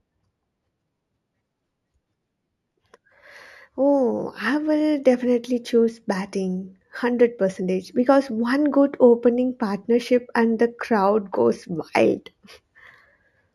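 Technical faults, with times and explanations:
Throughout, imaging from linear upsampling: the sound points to a rate rise from 16 kHz to 48 kHz done by joining samples with straight lines, a poor anti-imaging filter. The top of the original band is dulled, and a mirrored copy of the spectrum survives between 8 kHz and 16 kHz, roughly 40 dB below the speech. That faint image adds a light metallic shimmer to sibilants.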